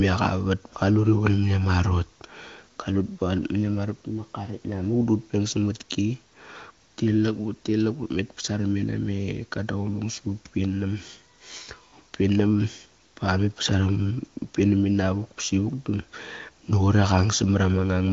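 No technical faults can be heard in this speech, which carries the bandwidth of an AMR wideband (HD Voice) link, with nothing above about 7.1 kHz, and whose coding quality points to one of that codec's top rates, around 23 kbit/s.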